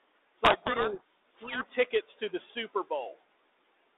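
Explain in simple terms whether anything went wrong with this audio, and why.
A codec payload misread runs from 0.44 to 1.70 s, burying the speech under harsh, grinding distortion. The phone line squeezes the sound into small numeric codes, and here the receiving end read the bits inside each code in the wrong order. Every code still looked valid, so the decoder kept playing, but each one came out as the wrong value. The damage stops at 1.70 s, once both ends agree on the bit order again.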